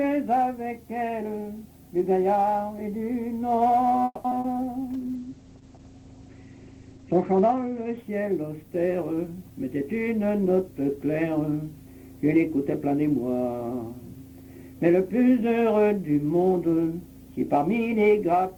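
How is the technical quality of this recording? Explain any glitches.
The recording has a cluster of network-related glitches between about 4.0 and 4.7 seconds, then a long stretch of reduced coding quality and a hurried passage running until nearly 11 seconds.

Call audio freeze, 4.05 to 4.26 s. The audio stalls for about 190 ms, most likely because packets were held up in transit and the receiver's jitter buffer ran dry. The receiver keeps extending the last sound as a fading buzz or hiss, with about 30 ms of near-silence, before resuming exactly where it stopped. Nothing is lost, but a gap is inserted.

Short concealed packet loss, 4.30 to 4.33 s and again 4.40 to 4.46 s. On both occasions about 40 ms of audio never reached the decoder in time. The receiver covers each hole by extrapolating from the preceding sound and then crossfading back to the real signal. The first patch is very brief, so part of that moment simply drops out. 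The second is a roughly 40 ms synthetic fill. Both come across as a quick smear or wobble.

Jitter buffer slow-down, 4.34 to 4.66 s. Right after the freeze the receiver rebuilds its reserve by repeating tiny slices of the waveform, single pitch periods or bits of pause, over and over. This adds about 40 ms and plays the passage at roughly 90% speed. Pitch is unchanged, but sounds are audibly drawn out.

Call bitrate drop, 4.94 to 9.94 s. The sender's bandwidth estimate fell, so the encoder's rate dropped from 40 to 10 kbps and stayed at its lowest for about 2 seconds. At that rate the codec quantises coarsely and narrows the audio band from about 20 kHz to 8 kHz. The sound turns muffled, losing its top-end detail until the rate recovers.

Jitter buffer speed-up, 9.07 to 10.88 s. With more audio queued than it targets, the receiver trims short pitch-period fragments repeatedly, removing roughly 150 ms in total. 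Playback runs at about 109% speed with the pitch held steady, so this stretch sounds noticeably rushed. It overlaps the end of the low-bitrate period.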